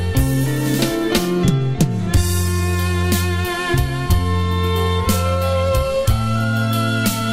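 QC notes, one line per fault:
Nothing to flag here; I listened to the whole thing and didn't hear any technical problems worth a line.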